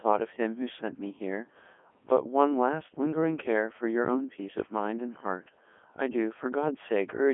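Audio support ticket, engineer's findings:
Codec 2 vocoder damage, whole clip: robotic, buzzy speech, heavy. Decoder rebuilds speech from sine waves, discarding the waveform; fits the 3.2 kbit/s mode. Spectrogram: clean harmonic stacks within 250 Hz to 3.4 kHz, empty above 3.6 kHz. Waveform: unnaturally regular periodic shapes.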